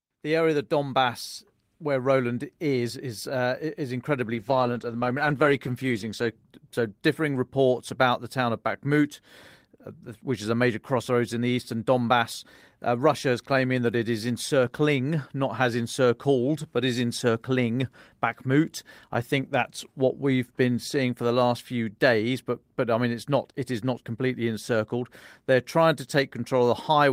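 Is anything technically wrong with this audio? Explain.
Yes. From 4.34 to 7.75 s there is a call bitrate drop: the encoder's bit budget collapsed, which fits a fall from 32 to 13 kbps, bottoming out for about 1.35 s. The speech turns coarse, watery and muffled, losing its high frequencies, before it recovers.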